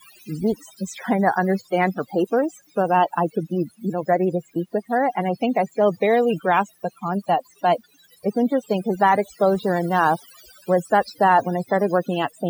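From the first second to the end, the speech carries overdone noise removal. The noise reducer was pushed far too hard: any frequency band that came close to its idea of the noise got pulled right down or shut off, and the softer parts of the voice went out along with the noise. So the gaps between phrases fall to near silence, dotted with little twinkling specks.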